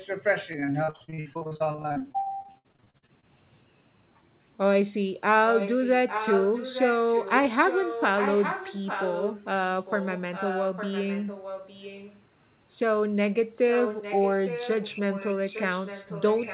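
Repeated packet loss (robotic sound) runs from 0.52 to 3.25 s: dozens of short gaps, the longest 61 ms, are patched by stretching the preceding sound, so nearly half the stretch is concealed and the speech turns choppy.

Echo leak follows at 5.53 to 5.92 s, 6.08 to 7.33 s, 7.52 to 9.60 s, 9.86 to 12.22 s and 13.55 s to the end. A copy of the speech trails 0.86 s behind, roughly 10 dB down and louder in the second span, likely loudspeaker pickup an echo canceller failed to remove.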